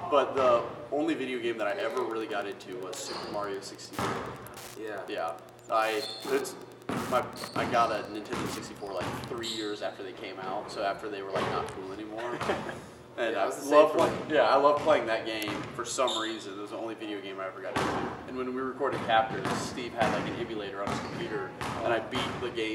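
From 1.56 s to 9.44 s a steady ticking runs under the sound at almost ten clicks per second, the signature of Wi-Fi interference. A nearby radio's beacon, repeating every 102.4 ms, gets picked up and rectified by the audio circuit, leaving a pulse train around 20 dB below the signal. A spectrogram shows thin full-height vertical lines evenly spaced across that span; the waveform carries matching regular spikes.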